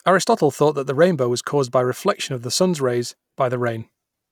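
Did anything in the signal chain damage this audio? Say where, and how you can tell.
No, nothing in this speech recording stood out on listening as damage from any stage of the signal chain.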